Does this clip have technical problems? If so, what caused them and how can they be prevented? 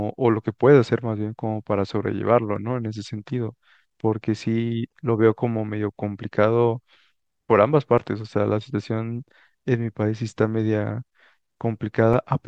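Yes. Damaged data in a compressed stream causes brief glitches at 2.56 s, 4.89 to 4.91 s, 7.98 s and 12.13 s in this speech. Corrupted bytes make the decoder misread frames and hunt for sync. Verifying transfers with checksums and keeping stream metadata out of the audio data would prevent it.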